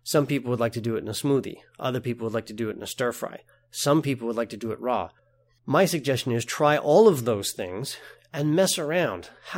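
A recording of speech with nothing technically wrong to point out anywhere in it.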